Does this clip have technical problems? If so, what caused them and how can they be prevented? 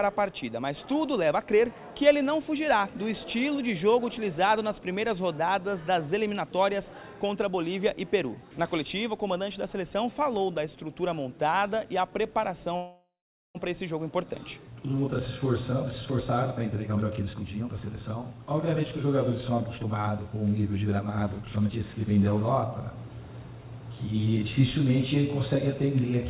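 Yes, there are two. The first is a call audio freeze from 12.76 to 13.57 s. The last bit of sound gets stretched into a fading buzz, then about 0.42 s of silence, before the audio picks up exactly where it left off. Nothing is lost, but roughly 0.8 s of delay gets pushed into the stream. The likely cause is packets stalling in transit until the jitter buffer ran dry. To prevent it, fix the congestion or Wi-Fi dropouts on the route, or give the jitter buffer more headroom.

Right after that comes a jitter buffer speed-up from 15.72 to 20.56 s. The sound runs at about 116% speed with the pitch unchanged, so it feels rushed. That's the receiver catching up on a backlog of bunched packets: it snips out tiny pitch-period-sized slices over and over, around 0.7 s in total, to bring the latency back down. To prevent it, stop the packet bunching upstream so the buffer never overfills and has nothing to trim. 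Underneath all of this, the band stops at 4 kHz, which fits a 64 kbps G.711 mu-law call leg.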